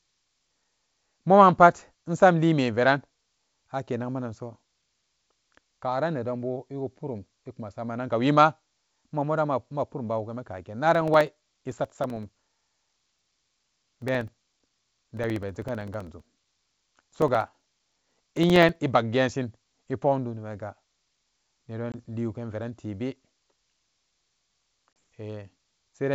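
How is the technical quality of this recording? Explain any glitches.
The speech carries two kinds of glitch, a long run of regular ticking in the middle and two short holes near the end, all heard through G.722 wideband telephone coding at 64 kbit/s, which adds at most faint coding noise.

From 10.95 to 18.76 s there are periodic USB or driver dropouts: every 64 ms a sliver of roughly 2 ms is lost and replaced by silence, about 150 times in all. This happens when something stalls the USB bus or audio driver on a fixed schedule. The result is an even ticking riding under the speech. A waveform shows evenly spaced notches of silence, and a spectrogram shows thin vertical broadband lines at a steady rhythm.

Packet loss on an ADPCM call causes the other two glitches, at 21.92 to 21.95 s with 20 ms lost and at 24.93 to 24.96 s with 30 ms lost, which fits about two and three packets. Each gap is filled with silence. 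Because ADPCM predicts each sample from the ones before it and adapts its step size, the decoder loses track of the sender. The speech resumes slightly distorted before it settles. On a waveform each gap is a flat, sharp-edged hole. A spectrogram shows a blank column.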